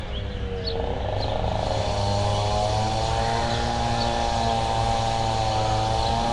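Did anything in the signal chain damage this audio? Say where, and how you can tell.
Yes. Nellymoser compression at the codec stage, throughout: a hissy, smeared texture with nothing above 10.6 kHz, likely from Nellymoser Asao filling starved bands with noise.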